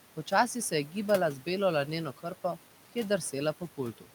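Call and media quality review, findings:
Noise suppressor artifacts, throughout: roughly 12 dB of band-wise noise reduction per frame, so room noise dips between phrases and swells under speech.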